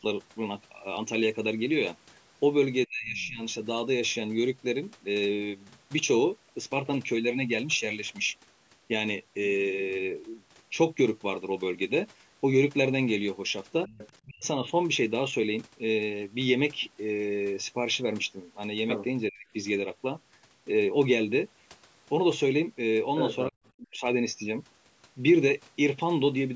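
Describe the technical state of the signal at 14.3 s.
At 14.3 s the speech falls inside a dip from 14.25 to 14.61 s, likely speech suppressed in double talk. An echo canceller could not separate the near talker from loudspeaker echo and cut the level by around 40 dB, so the voice drops sharply. Channel delay (comb filtering) continues underneath. One channel lags by a fraction of a millisecond before a mono sum, which cuts evenly spaced notches starting near 1.5 kHz and leaves the sound hollow and phasey.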